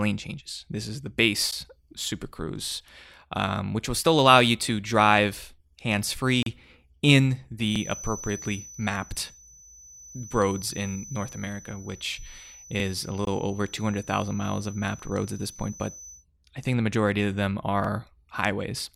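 Separately encoded pieces of this speech were joined without trimming the encoder's leading delay and trailing padding, leaving a gap at a join of encoded pieces at 1.51 s: a gap of about 12 ms cutting into the speech with smeared edges before the sound resumes where it stopped.

Next, the audio was handled in 5 s chunks, each starting 44 ms before the previous one ended, so overlapping chunks replay that sliver at every boundary. The first one comes at 2.71 to 2.76 s, just before "um which will still", and sounds like a brief stutter or click.

A second encoded-piece gap follows at 6.43 to 6.46 s, right after "you to drive hands". This is a 36 ms dropout with smeared edges.

The overlap stutter recurs on the 5 s grid at 7.76 to 7.80 s and 12.80 to 12.84 s.

A third join gap of about 21 ms sits at 13.25 to 13.27 s.

A final 44 ms repeat comes at 17.84 to 17.89 s, just after "the majority of them".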